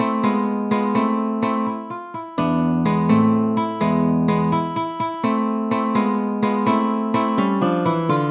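No technical faults are audible.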